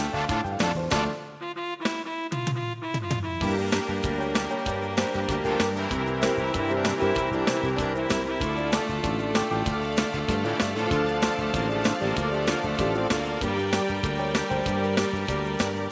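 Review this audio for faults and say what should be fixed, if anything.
No faults; nothing to fix.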